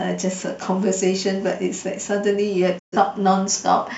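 At 2.78 s the speech fades out over 20 ms and stays silent until 2.97 s. This digital broadcast dropout muted failed frames.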